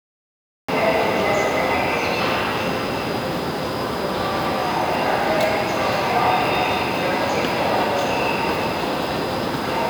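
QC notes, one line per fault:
0.00–0.69 s, cut-off start: capture began late, so digital silence gives way at 0.69 s to sound already underway, with no natural attack or fade-in.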